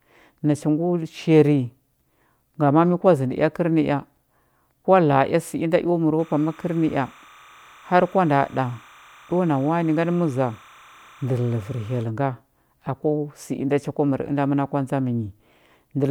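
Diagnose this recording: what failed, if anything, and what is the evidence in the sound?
Timecode bleed in the analogue wiring runs from 6.19 to 12.03 s as a chirping warble well below the speech, about 30 dB down. Linear timecode at 30 frames per second leaks from a neighbouring line, flipping between pitches near 1 and 2 kHz. That two-tone rhythmic switching distinguishes it from a single steady whistle or mains hum.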